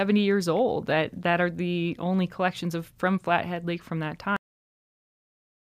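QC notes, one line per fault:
4.36–5.73 s, cut-off end: the final buffers were never written or played out, so the speech stops abruptly at 4.36 s, right after "from that", in the middle of a sound. It falls straight to digital silence with no natural decay and stays silent to the end.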